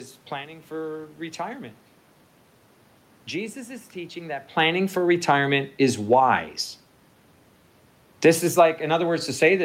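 No technical faults are audible.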